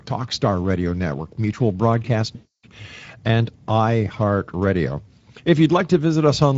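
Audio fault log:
Throughout, Speex codec: the speech has a noisy, hoarse grain that never goes away, and it's plainly audible. That's the CELP coder running short of bits for the excitation, so instead of a clean reconstruction of the voice's fine structure you get a rough, buzzy approximation layered onto the spectral envelope. The amount of roughness fits a middling quality setting, something around 16.8 kbps, low enough to color everything.
2.35 to 2.65 s, VoIP packet loss concealed by the speech codec: about 280 ms of audio drops out, and the decoder fills the gap by repeating its last pitch and filter shape with the gain stepping down each frame. That's why the sound smears into a buzzy tone or a coloured noise that fades rather than going silent. Because each decoded frame leans on the previous one, the voice stays weak or distorted for tens of milliseconds or more after the stream resumes.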